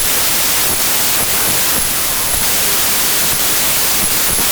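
Loud hissing noise buries the speech throughout, which plays slowed to 0.75 speed and lower in pitch. Wrong sample width: 32-bit integer audio read as packed 24-bit.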